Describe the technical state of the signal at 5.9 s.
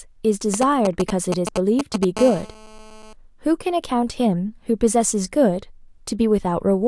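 At 5.9 s the speech signal is intact, with no audible dropout, distortion or other technical fault.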